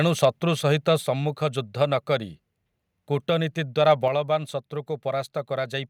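At 3.90 to 3.92 s, likely microphone overload: input gain ran about 1 dB past the converter's limit, flattening around one percent of samples and giving that speech burst a brief harsh crackle. At 4.08 s, the microphone volume was stepped down, likely by call software reacting to that clipping, so speech and background drop abruptly by about 5 dB.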